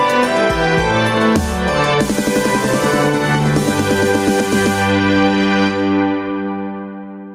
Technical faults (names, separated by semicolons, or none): gain pumping